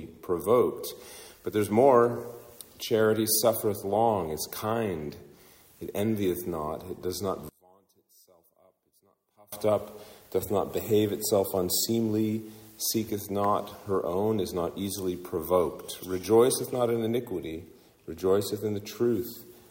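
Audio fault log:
7.49–9.53 s, one channel inverted: the level drops by about 32 dB, leaving only a faint trace of the sound for roughly two seconds before it returns at full strength. The likely cause is one stereo channel flipping polarity, so when left and right are summed to mono, everything common to both cancels out. What survives is just the small difference between the channels, which explains the nearly vanished result.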